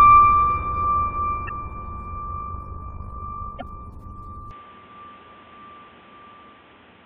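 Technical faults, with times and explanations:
1.45–1.51 s and 3.57–3.63 s, damaged data in a compressed stream. Two short bursts of the music are damaged, each lasting under a tenth of a second. Part of the compressed data at these points is corrupt. The decoder cannot read those frames properly. It loses its place and hunts for the next valid frame header. That produces the glitch.
2.31–3.78 s, overlap-add ripple. Across this stretch the level pulses rapidly, rising and falling by about 6 dB. The rate is around 50 times a second. The music was split into overlapping windowed frames and rebuilt with an overlap whose gains do not add up evenly. Each frame boundary therefore carries a small dip or bump. The result is a fast, rough flutter.
4.51–7.05 s, input switched to a poorer device. From 4.51 s to the end, the sound abruptly turns dull and boxy. There is no gap at the change, and the loudness stays roughly the same. 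New background noise appears, sitting roughly 30 dB under the music. The sudden narrowing of the band plus a fresh noise floor likely means the recording moved to a lower-grade microphone or headset.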